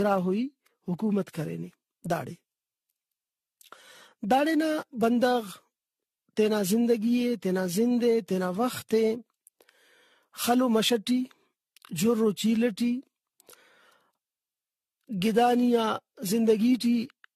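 From start to finish the speech carries generation loss. It sounds swirly and hollow, with a smeared, watery quality. Consonant onsets lose their edge and blur together. Nothing is heard above about 14.3 kHz. The damage is heavier than one lossy pass would leave. It points to an AAC-LC stream around 64 kbit/s, likely decoded and re-encoded around ten times. Each pass requantised on a shifted frame grid, stacking noise and spectral holes.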